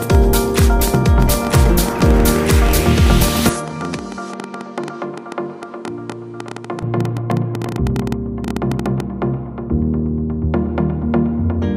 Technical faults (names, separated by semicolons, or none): train of clicks; input switched to a poorer device